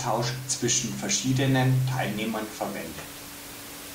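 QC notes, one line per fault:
No technical fault can be heard anywhere in the speech, with only the room's own background noise present, sitting about 15 dB below the voice.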